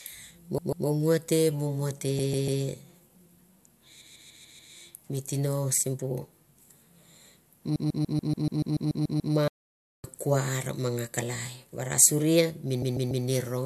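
The speech stutters five times from repeated frames, where the same 144 ms chunk of compressed audio gets played over again. It happens at 0.58–0.87 s with two extra plays, 2.19–2.62 s with three, 4.01–4.73 s with five (just before "mi tino sibu"), 7.75–9.34 s with a long run of eleven, and 12.82–13.25 s with three. Each run stretches the clip by the repeated time. That 144 ms block fits a group of six codec frames of about 24 ms each.

Right after that long run, the sound just stops at 9.48 s and stays silent for about 0.56 s, then picks up again at 10.04 s with "kuar ma". That's a playback stall, and the likely cause is the player running out of data or getting blocked before it recovered.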